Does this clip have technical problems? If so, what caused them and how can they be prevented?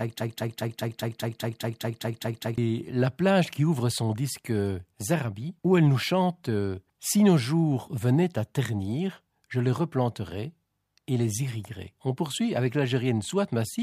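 Yes: from 0.0 to 2.58 s, already under way when the clip opens, a 204 ms fragment of speech repeats exactly a dozen times, a broken-record loop likely caused by a stalled player or stream resending its last fragment. Prevent it by detecting stalls and inserting silence rather than replaying stale buffer contents.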